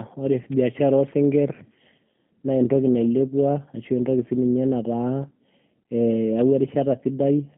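From start to finish, the speech carries G.729 codec damage. The sound points to a low-rate voice codec at 8 kbit/s. The band runs from about 150 Hz to 3.4 kHz, so the lows and all the upper air are gone. Each short frame is rebuilt from a vocal tract model, a pitch predictor and a few pulses. The result is plainly rough and synthetic.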